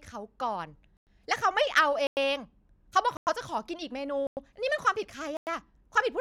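The speech was delivered in one-second chunks, and a stretch of silence opened up at each join, a gap between chunks, so playback halted for 100 ms before every new chunk began. Because nothing is dropped, the speech simply resumes where it stopped. The holes fall at 0.97–1.07 s, 2.07–2.17 s, 3.17–3.27 s, 4.27–4.37 s and 5.37–5.47 s. The result is a steady stop-start stutter every 1.1 seconds.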